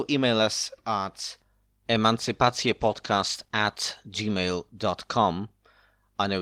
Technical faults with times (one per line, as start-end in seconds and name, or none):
2.20-4.77 call bitrate drop